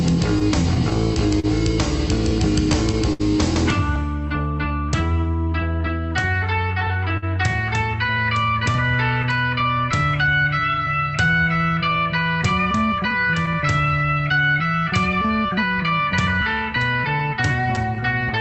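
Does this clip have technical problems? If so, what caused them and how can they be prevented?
Yes, there are a few, and they all come down to timing.

Clock drift between sender and receiver runs through the whole clip. The sender's clock is running a few percent slow, so the receiver keeps getting less audio than it plays and has to patch and stretch to keep going. To prevent it, the sending device should lock to a stable clock, or the sender should resample to correct its rate before encoding.

Scattered short gaps show up in three stretches. About ten come between 0.39 and 3.22 s, with the longest around 70 ms. About seven come between 6.62 and 10.80 s, with the longest around 50 ms. About five come between 16.76 and 18.23 s, with the longest around 10 ms. Each hole was filled by carrying the last sound forward. Prevention is a steadier network path or a bit more jitter-buffer depth.

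There's a repeated buffer at 3.96 s. One tiny chunk, 1.33 ms long, played three times in a row, which fits a 64-sample buffer. That comes across as a quick click or buzz rather than a stutter you could pick out, with hard joins at each repeat. It happened because fresh audio didn't arrive in time and the device replayed what it had. To prevent it, use a larger device buffer or give the audio thread higher scheduling priority.

Repeated timing corrections run from 4.68 to 17.63 s. Playback is held at about 97% speed while the receiver keeps inserting small bits to stay in step with the slow sender. Altogether that adds roughly 400 ms. The edits are uneven in spacing. Fix the underlying clock mismatch and these corrections go away.

Repeated stalls (stutter) hit between 13.11 and 13.56 s. The jitter buffer ran dry three times, and 36 ms in total was filled by continuing the last sound. The longest stall is 12 ms. 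Nothing is actually lost, but that half-second drags and stutters. Packets were arriving slower than they were played. A larger adaptive jitter buffer and less congestion on the link would prevent this.

The audio came through an Opus call path at 40 kbps, and its high end stops around 8 kHz.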